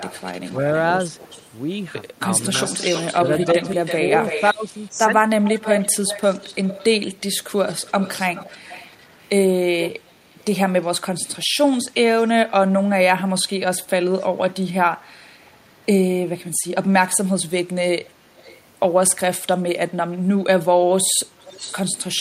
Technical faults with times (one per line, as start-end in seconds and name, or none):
0.00-4.49 echo leak
3.54-5.13 speech suppressed in double talk
5.43-10.44 echo leak
12.21-12.30 echo leak
14.20-14.26 echo leak
18.02-18.61 echo leak
21.41-22.21 echo leak